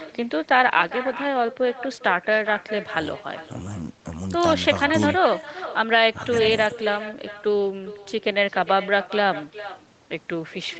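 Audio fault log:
Throughout, echo with no canceller: the far end's loudspeaker fed the call back into its microphone and nothing subtracted it. The speech returns after roughly 0.4 s, about 14 dB quieter, so each phrase is trailed by a faint, thin copy, band-limited like the 8 kHz call path it crossed.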